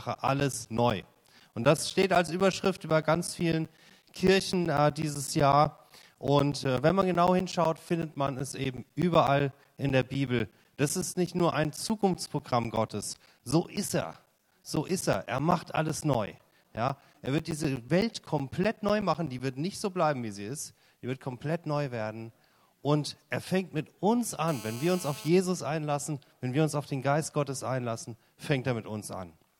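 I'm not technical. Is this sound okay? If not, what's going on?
No. Periodic USB or driver dropouts run from 0.15 to 19.4 seconds: eight times a second, something on the computer briefly stalls the audio connection, and each time roughly a hundredth of a second of sound goes missing and turns to silence. You hear this as a steady train of ticks.

GSM phone buzz appears from 24.48 to 25.28 seconds. A nearby mobile phone on a call sends radio pulses about 217 times a second, and the audio equipment picks them up as a harsh, raspy buzz at that pitch, unrelated to the recorded sound.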